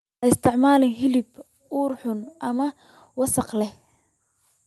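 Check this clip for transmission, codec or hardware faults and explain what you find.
The clip has one hardware-side fault, occurring twice. At 0.47 s, just before "hilib ur xun ama", and again at 1.47 s, before "ur xun ama wasakh", the speech and background drop abruptly in level, by about 2 dB and then about 4 dB. This is a microphone volume step-down, likely the call software cutting the input gain in one step. The speech passes through the WebRTC call path with an Opus-like top end near 12 kHz.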